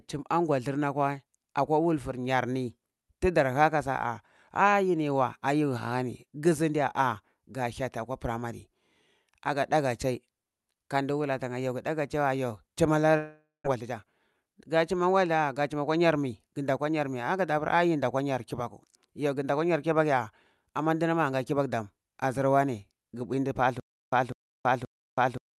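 At 13.17 s, right after "chai wa yo chima", the speech breaks off in what is likely a long network dropout. For about half a second until 13.66 s, the last sound is drawn out as a fading buzz and then falls to silence. Roughly 0.4 s of speech is lost outright. On a spectrogram the final harmonics smear into a blurred, decaying band, followed by a near-empty strip. The waveform envelope tapers off and then flattens for the last 0.17 s or so.

From 13.76 to 14.55 s, leading into "ga chuma wada ga", the receiver works off the backlog left by the dropout with a jitter buffer speed-up. It trims short pitch-period slices again and again, so the speech runs about 8% fast at unchanged pitch and sounds slightly rushed. Roughly 70 ms is removed in total. A spectrogram shows the harmonic spacing unchanged but syllables packed tighter. The waveform shows small splice points where cycles were cut out.

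At 23.80 s, after "bui ndu", playback falls into a stutter with silent gaps that lasts to the end of the clip. A 0.2 s fragment repeats every 0.53 s, with about 0.33 s of digital silence between repeats. The likely cause is a stalled stream that replays its last piece at each retry. The waveform shows identical bursts separated by near-flat lines. A spectrogram shows matching blocks separated by near-blank columns. Through the Opus call path, the spectrum stops at 12 kHz, and the codec runs at about 64 kbps.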